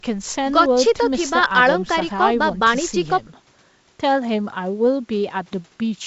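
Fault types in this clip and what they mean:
No faults are present.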